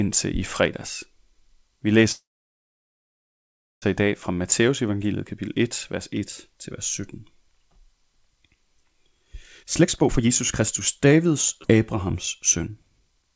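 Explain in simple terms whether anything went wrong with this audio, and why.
Several things went wrong in this speech recording. From 2.12 to 3.84 s there is a call audio freeze: the sound stalls into about 1.6 s of near-silence, likely because delayed network packets left the receiver with nothing to play, then resumes at "i dag" with nothing lost.

A jitter buffer speed-up runs from 9.6 to 11.28 s, where playback races at about 131% speed and trims roughly half a second. A milder one from 12.57 to 13.32 s runs at about 108% and trims around 70 ms. Both shorten backed-up audio to catch up, keeping pitch but sounding hurried.

At 11.63 to 11.66 s there is a skip ahead: nearly half a second of audio is dropped and playback jumps straight to later material. The call codec path also cuts everything above 8 kHz.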